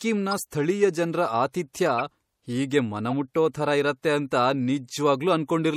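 MP3 compression runs through the whole speech clip: weak frequency lines drop in and out between frames, giving a watery, swirly quality with smeared attacks and chirpy s sounds. This likely comes from an MP3 encode at around 64 kbps.

A corrupt frame decoded is heard at 0.31 to 0.40 s, just before "ಸ್ಥಳೀಯ ಜನ್ರ", at 1.96 to 2.01 s, and at 3.11 to 3.13 s, just before "ಥರ ಇರತ್ತೆ ಅಂತ". Damaged frames were played anyway, throwing energy to wrong frequencies. Each is a brief chirp or noise burst peaking near -20, -20 and -25 dBFS, spanning a few frames, two frames, then one.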